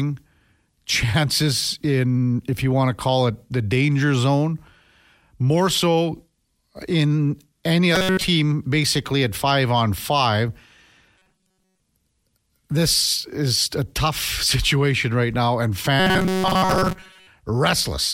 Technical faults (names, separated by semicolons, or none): robotic sound from repeated short buffers